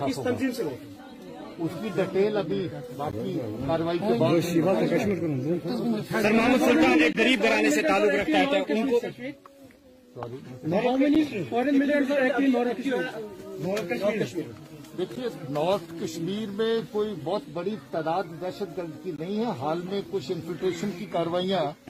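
At 3.11 s there's a short hard-edged dropout, and it comes back at 7.13 to 7.15 s, 11.15 s, 15.16 s and 19.16 to 19.18 s, spaced every 4 s. That's a gap between stream segments: consecutive 4-second chunks have timestamps that don't quite meet, so the player pads the hole with silence. The holes last between 8.5 and 19 ms and sound like abrupt little ticks or blinks in the sound. Nothing is actually missing from the audio.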